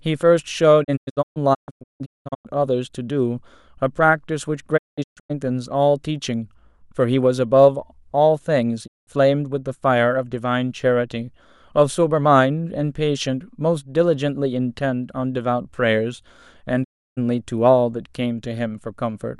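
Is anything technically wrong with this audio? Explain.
Yes. There are digital broadcast dropouts at 0.83–2.47 s (about 1 s lost in scattered holes), 4.76–5.32 s, 8.86–9.09 s and 16.83–17.19 s. The receiver muted on bad frames, so the speech fades out over 20 ms into blank gaps. On a waveform or spectrogram these show as flat, empty columns.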